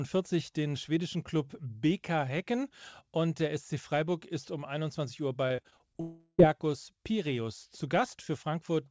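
A speech recording carried over a call link, with the G.722 codec at 64 kbps limiting the band to nothing above 8 kHz, shows two faults in quick succession. From 5.48 to 5.97 s there is repeated packet loss (robotic sound): six short gaps, the longest about 22 ms, remove roughly 120 ms of audio. Each hole is patched by extending the preceding sound, so about a fifth of that half-second is synthetic fill, giving a choppy texture with fragments missing. Immediately after, from 6.01 to 6.49 s, the sound stops progressing. The last fragment is held and smeared into a fading buzz or hiss for nearly 380 ms, ends in about 20 ms of silence, and then resumes with that stretch of material simply absent. The likely cause is a long network dropout in which no packets reached the receiver and concealment bridged the gap until it gave out.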